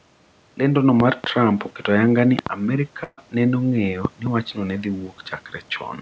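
Loud pops at 1.00–1.26 s and 2.39–2.49 s: each is a pair of sharp pops riding about 15 dB and about 20 dB above the speech, which carries on underneath. The likely cause is a sudden voltage step or static discharge entering the signal, with the following circuitry shaping it into short pulses.

Burst of packet loss at 3.04–3.19 s: several consecutive packets failed to arrive in time. The receiver extended the last sound for 135 ms, fading it down, with 10 ms of silence, then resumed 140 ms further into the speech, so that part is missing. The call path has no content above 8 kHz, which fits G.722 at 64 kbps.

Loud pops at 4.05–4.29 s: another double pop standing about 15 dB above the speech, most likely from the same kind of electrical transient briefly added to the signal.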